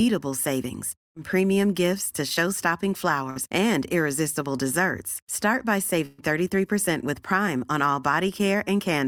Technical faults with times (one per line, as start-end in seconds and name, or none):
1.03-1.17 burst of packet loss
3.30-3.39 burst of packet loss
6.06-6.21 burst of packet loss